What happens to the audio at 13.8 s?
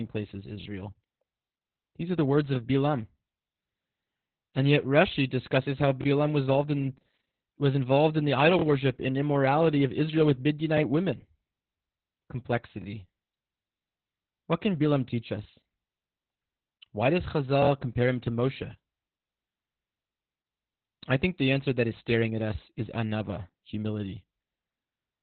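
At 13.8 s, as throughout, heavy Opus voice compression in narrowband SILK mode, which fits roughly 8 kbps, cuts everything above 4.2 kHz, leaving speech muffled, hoarse and slightly robotic.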